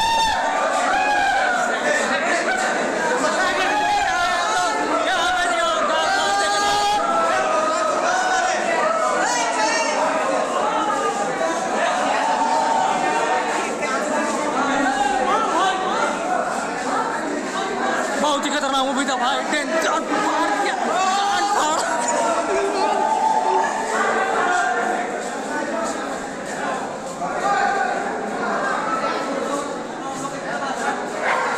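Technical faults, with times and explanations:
No technical faults are audible anywhere in the audio.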